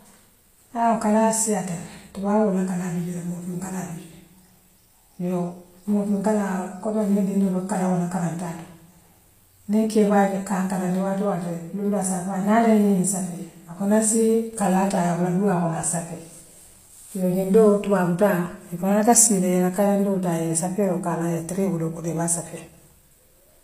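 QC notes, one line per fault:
Throughout, HE-AAC compression: the treble is likely rebuilt from copied lower bands, fitting about 24 kbps, so s sounds turn gritty and metallic, with nothing above 15.4 kHz.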